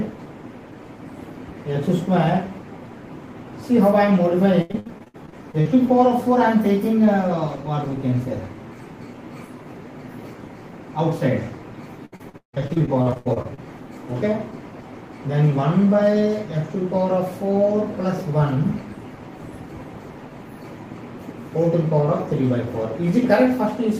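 From 4.61 to 5.67 s, and again from 12.05 to 13.59 s, repeated packet loss (robotic sound) breaks the audio into short holes, the longest about 81 ms and 157 ms. Each gap is patched by stretching the previous sound, concealing about a third and then over two fifths of each stretch, so it turns choppy. A spectrogram shows smeared, flat-held harmonics between abrupt breaks, and the waveform shows repeated cycles and clipped-off segments.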